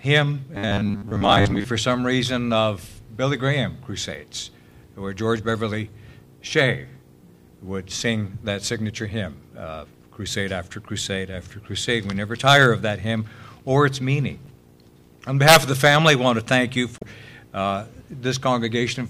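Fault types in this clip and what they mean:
Robotic sound from repeated short buffers: From about 0.55 to 1.65 s the sound goes rigid and metallic, with a steady buzz at 100 Hz laid over it, and roughly half of what you hear in that stretch seems to be repeated material rather than new audio. The likely cause is playback starving for data and looping its last chunk to fill the gap. A 100 Hz buzz fits a chunk of about 10 ms being replayed again and again.
Damaged data in a compressed stream: There are two short blips, at 14.43 to 14.49 s and at 16.97 to 17.03 s, each around 50 to 60 ms long. Both sound like the decoder tripping over corrupted frames. It can't make sense of the bad data, loses sync, then picks up again at the next clean frame.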